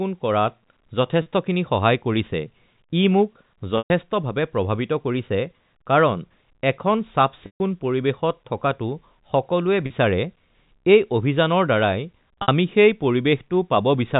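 Packet loss with pitch repetition hits at 1.22, 3.78, 7.46 (just after "কাৰণ এখন"), 9.86 and 12.42 s, losing 40, 120, 140, 40 and 60 ms. The last pitch period is looped, so gaps buzz briefly instead of going silent like a plain dropout. The longer ones fade out.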